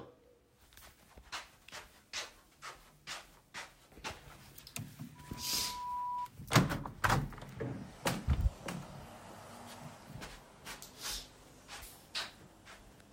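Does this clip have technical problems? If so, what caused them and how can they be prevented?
Yes. From 5.15 to 6.30 s a steady tone near 982 Hz swells over roughly three quarters of a second into a squeal as loud as the surrounding sound. This is loudspeaker feedback squeal: the microphone picked up its own loudspeaker, and at that frequency the loop's gain exceeded one, so the tone fed on itself. Keeping microphones away from and behind loudspeakers, lowering gain, or notching that frequency prevents it.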